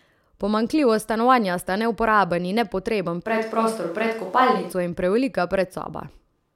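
At 3.28 s the speech suddenly turns roomy and hollow, loses its low end, and a background bed of room noise appears, sitting around 30 dB below the voice. The loudness barely shifts, so it's the tone that gives it away. At 4.71 s it snaps back to the close, full sound. This is a switch to a distant microphone, likely because the close mic's feed dropped out and a farther pickup, such as a camera mic, filled in.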